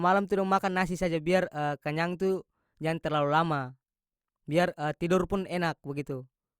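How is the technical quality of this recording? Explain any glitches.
No glitches or technical faults can be heard in this speech recording, so there is nothing to explain.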